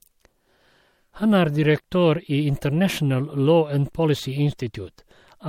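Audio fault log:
throughout, generation loss: likely several MP3 re-encodes, fitting 64 kbit/s, each adding fresh quantisation noise; speech turns swirly, hollow, smeared, attacks blur, nothing above 16.6 kHz.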